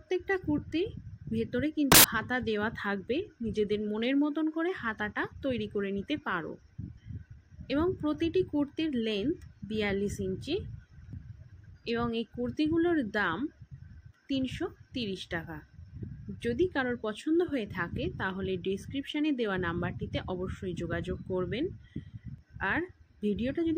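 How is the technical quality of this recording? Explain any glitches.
The recording has one glitch. From 1.92 to 2.04 s, samples built from the wrong bytes: the reader misassembled each sample's bytes, so noisy low bits dominate, producing a burst of loud, harsh broadband noise.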